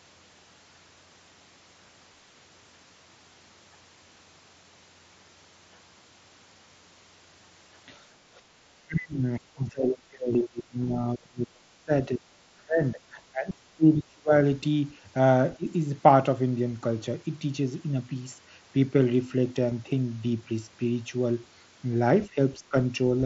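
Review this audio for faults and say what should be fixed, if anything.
Four short glitches sit in the speech at 2.88 s, 10.33 s, 15.18 s and 19.71 s. Each is a brief patch where the waveform seems to repeat itself rather than drop out. The ones at 2.88 s and 19.71 s last 7.5 ms, which fits a single lost mSBC frame, and are almost inaudible. The ones at 10.33 s and 15.18 s last 15 ms and carry a buzzy tone held at full level. This is concealed Bluetooth headset packet loss: the receiver fills each gap by copying the closest-matching piece of the audio just before it. Preventing it means improving the radio link, by keeping the headset close to the phone and away from crowded 2.4 GHz traffic.

From 8.30 to 8.48 s the room sound behind the talker dips by about 9 dB for a moment and then comes back. This is background gated by the echo canceller. Sound from the far end was playing through the loudspeaker, so the canceller pulled the microphone down to keep that sound from echoing back, then released it. 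A gentler suppression setting in the echo canceller, or comfort noise during the dips, would keep the background steady.

Across much of the middle the talker's voice sinks, dulls and breaks up. The heaviest stretches run from 8.76 to 11.92 s, affecting about 3 seconds in total, and from 12.08 to 14.32 s, about a second and a half. Both fall by roughly 30 dB at their deepest. Shorter dips follow at 15.57–15.67 s (about 20 dB), 22.27–22.37 s (only about 5 dB) and 22.59–22.75 s (about 15 dB). The likely cause is speech suppressed in double talk. Both sides were speaking at once, the canceller could not tell the near talker from the loudspeaker echo, and it turned everything down. A canceller with better double-talk detection, together with less loudspeaker-to-microphone coupling, would prevent it.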